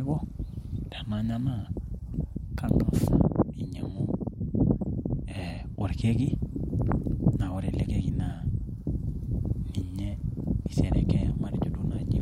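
No technical faults are audible.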